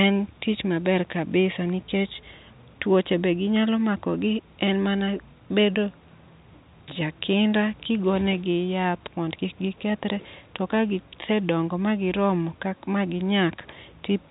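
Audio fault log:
No faults logged; the speech carries the narrow telephone band of G.711 telephone coding, with nothing above 3.8 kHz, which fits 64 kbps mu-law.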